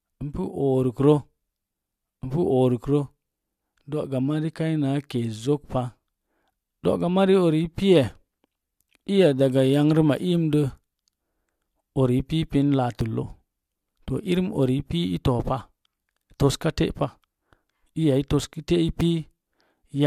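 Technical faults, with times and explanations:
8.04, 9.03, 13.01, 14.00, 16.99, 19.01 s: overlap between stream segments. At 1-second segment boundaries, roughly 15 to 20 ms of speech is trimmed away, so the waveform jumps with a click or tiny skip. Unlike a dropout, no silent gap is heard.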